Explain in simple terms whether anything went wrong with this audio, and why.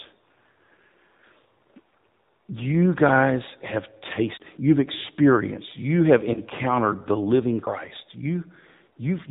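The speech has passed through the AMR narrowband mobile codec, the standard 2G/3G phone speech coder. It discards everything above 4 kHz and rebuilds the voice from a simple vocal-tract model, so the whole clip sounds muffled, buzzy and noticeably synthetic.

At about 6.34 to 6.40 s there is a lost AMR speech frame. The decoder filled the gap by repeating its last good settings at lower level, giving a brief dip and warble that fits a single dropped 20 ms frame.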